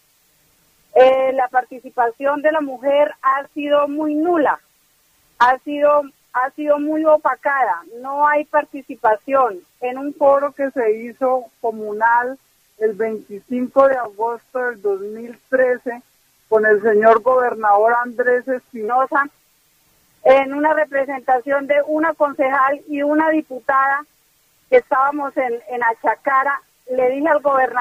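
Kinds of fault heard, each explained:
Section at the wrong speed: from 10.21 to 18.88 s the sound drops into a slower, lower register, running at 0.884 times its proper rate, which pulls the pitch down by about two semitones. Because speed and pitch shift together at the boundaries, the change is abrupt rather than gradual. This is likely a mismatch in clock rate when that stretch was edited or played back, so the samples were read out more slowly than they were captured.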